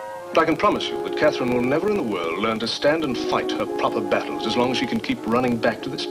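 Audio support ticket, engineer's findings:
Filter restarted on every block: a processing stage clears its filter state at each block boundary, so every block starts from silence. The result is a 25 Hz buzz of small ticks, one per 40 ms block, present throughout and rising and falling with the signal level.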